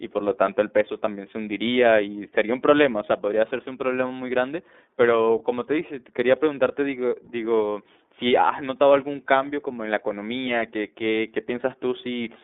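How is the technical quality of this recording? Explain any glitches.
The speech has plainly audible codec damage from start to finish, caused by the iLBC codec. The band runs only from about 250 Hz to 3.6 kHz. Each frame's excitation is coded independently, which fits iLBC's 30 ms mode at 13.33 kbps, so the result sounds thin, slightly rough and synthetic.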